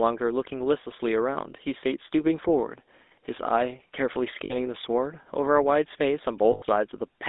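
Throughout the speech the GSM full-rate codec is plainly audible. The sound is confined to a narrow line band of roughly 250 Hz to 3.7 kHz. The codec rebuilds the voice from a vocal-tract model excited by a sparse, regularly spaced pulse train, and that thinned excitation leaves a buzzy, gravelly grain on every voiced sound. This grain is what separates it from simple band-limiting, which would only dull the sound. The overall character fits the 13 kbps full-rate scheme.

From 4.44 to 4.54 s, lost GSM frames interrupt the audio for about 60 ms, which fits three 20 ms frames. The decoder fills the gap by repeating the last good frame's parameters, so instead of silence or a click there is a brief rough, metallic ring. A second loss from 6.52 to 6.63 s lasts about 100 ms and rings longer. A plain dropout would go abruptly silent, while these gaps are held, which marks them as concealment.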